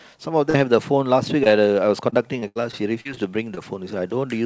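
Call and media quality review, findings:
Short concealed packet loss: brief smears/wobbles at 0.50 s (about 40 ms), 1.44 s and 3.55 s (about 20 ms each). Network/jitter buffer side: audio arrived too late, so the decoder stretched the last bit of speech over the hole and crossfaded back.

Repeated packet loss (robotic sound): choppy stretch 2.10–3.19 s. Six separate holes, longest 77 ms, about 17% of that span patched. Same concealment firing over and over, so pieces of speech go missing. Band tops out at 8 kHz, which fits a wideband call codec.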